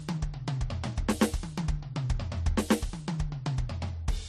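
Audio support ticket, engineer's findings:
Likely transcoding between lossy codecs, throughout: low-bitrate encode re-encoded by another codec, final stage consistent with MP3 at 43 kbit/s. Music carries two layers of different codec artefacts at once; nothing above 15.1 kHz, lowest cut-off in the chain persisting.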